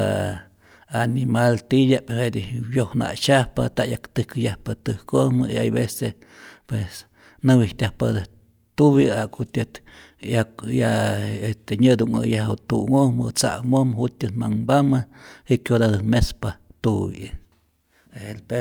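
Nothing in this speech recording stands out as a technical fault; there's no dropout, glitch or distortion anywhere to flag.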